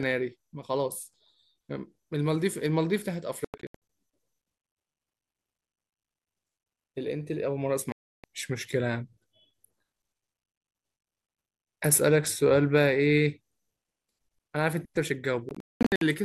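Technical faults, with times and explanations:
3.45 to 3.75 s: Bluetooth dropout. The speech cuts out in several abrupt gaps spread over about 0.45 s, the longest about 93 ms. Packets likely missed the headphones in time. When sound returns, it has moved on, as if it had played through.
7.92 to 8.24 s: Bluetooth dropout. Here the speech falls silent in one continuous hole of about 0.32 s, with sharp edges. This is likely packets dropped on the wireless link. The speech resumes further along, so the missing stretch is simply skipped.
15.49 to 16.02 s: Bluetooth dropout. The speech breaks up over about 0.54 s. Several gaps remove about 0.37 s in total, the longest about 205 ms. Late packets were likely discarded. Each restart lands later in the speech, never picking up where it stopped.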